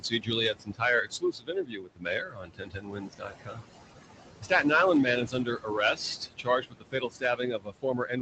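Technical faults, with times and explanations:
Throughout: noise suppressor artifacts. The room noise, sitting about 10 dB below the speech, is pushed down by about 19 dB in the gaps and swells back under the voice. The gain changes band by band, frame by frame, unlike a steady broadband noise floor.
0.0–0.33 s, 0.53–0.82 s, 1.04–3.69 s, 4.41–4.64 s, 5.25–5.78 s and 6.18 s to the end: speech cut by the noise suppressor. Soft consonants and quieter stretches are treated as noise and drop by about 15 to 21 dB, so they sound swallowed. The background sinks along with them, unlike a packet dropout, which leaves a hard silence or a gap.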